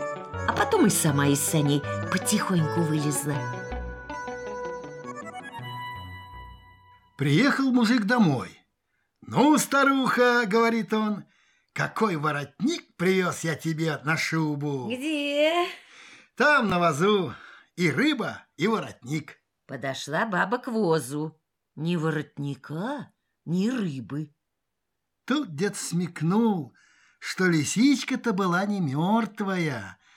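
At 0.58 to 0.60 s there is a Bluetooth stutter. A short slice of sound, about 19 ms long, plays twice in a row. The receiver ran out of fresh data and replayed its last buffer. That fits a single late or lost packet. It is heard as a brief hiccup. Then the sound jumps ahead, skipping the missing part. The same stutter returns at 16.70 to 16.72 s, again lasting about 19 ms.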